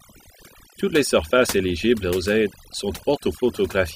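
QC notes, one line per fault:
Throughout: overdone noise removal. The noise reduction was set too strong, so narrow frequency bands near its noise estimate are pulled far down or shut off, taking quiet parts of the speech with them; the background drops and breaks up into twinkling specks.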